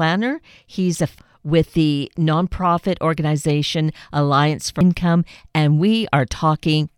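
At 1.19 s, between "he's a" and "with the nonprofit organization", and again at 4.81 s, compressed frames are skipped. Roughly half a second, then about 0.7 s, vanishes, leaving an abrupt spectrogram discontinuity.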